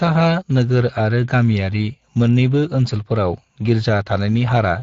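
Speech runs through Speex codec damage from start to finish, and it is plainly audible: the voice has a hoarse, noisy grain, which fits a Speex stream at around 20 kbps. This CELP coder rebuilds speech from a vocal-tract filter driven by a coded excitation, and errors in that excitation become the rough texture heard here. On a spectrogram the harmonic striations in voiced stretches look smeared and broken by noise-like energy, while the waveform's pitch periods appear less regular than clean speech.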